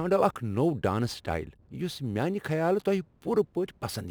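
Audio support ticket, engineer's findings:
Crude rate conversion throughout: gritty inharmonic fizz following loud, bright speech, roughly 30 dB down. Nearest-sample 48 to 44.1 kHz. Spectrogram: stray tones between harmonics.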